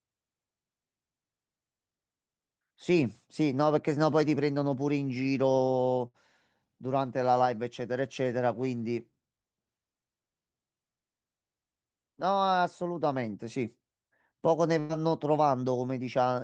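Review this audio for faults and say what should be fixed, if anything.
Bursts of packet loss at 6.07–6.17 s and 14.80–14.99 s: consecutive speech packets arrived too late or not at all, so the receiver stretched the last sound and faded it, about 65 ms and 94 ms of concealment, before jumping ahead past roughly 40 ms and 80 ms of lost speech. Adding forward error correction or packet redundancy, with a jitter buffer sized for these late arrivals, would prevent it.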